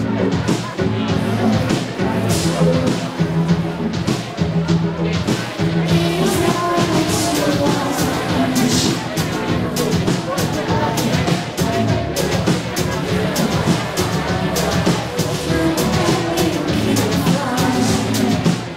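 Periodic clock jitter runs through the whole clip: the converter's clock is being wobbled at around 400 Hz, so every component picks up sidebands that far above and below it, giving the sound a rough, metallic edge that drops away whenever things go quiet.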